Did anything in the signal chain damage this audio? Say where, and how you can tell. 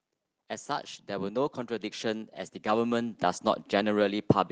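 Yes, in the call processing: automatic gain rising. From 0.66 to 3.52 s the speech and the background noise swell together by about 10 dB, a slow climb rather than a step. That's the AGC deciding the input was too quiet and ramping its gain up gradually.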